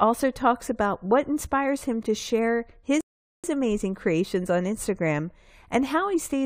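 At 3.01 s the speech drops abruptly into silence and picks up again at 3.44 s exactly where it broke off, with nothing missing. This is a rebuffering stall: playback exhausted its downloaded audio and waited for more, adding about 430 ms of dead air.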